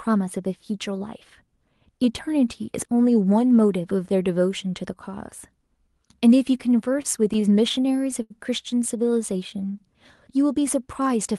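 From 6.93 s to 8.32 s the speech drags and stutters. It hangs on a sound a dozen times, with the longer holds fading out before the audio moves on. These are repeated stalls (stutter). Packets reached the receiver late, and its jitter buffer kept running dry. Each time, it extended the last sound rather than leave silence. About 185 ms is filled this way, roughly 13% of the stretch, and the longest hold is 82 ms. Nothing is actually lost.

Between 9.33 s and 9.73 s the speech slows to about 90% speed at unchanged pitch. Sounds are drawn out. This is a jitter buffer slow-down. Running low on reserve or having just raised its target delay, the receiver repeated single pitch periods and slivers of pause over and over, adding 47 ms to rebuild its margin. The call path itself is audible as Opus coding at 32 kbps with output limited to 12 kHz.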